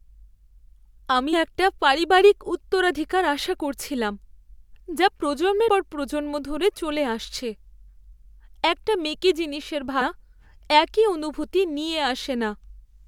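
Speech here, and you'll catch three short blips, at 1.32, 5.67 and 10.00 s, each only about 12 to 18 ms long. That's damaged data in a compressed stream: part of the encoded file got corrupted, so the decoder misreads the frame at each spot, loses sync, and has to find the next valid frame header before it can play cleanly again. The bad frame comes out as a quick chirp, squawk, click or short hole in the speech.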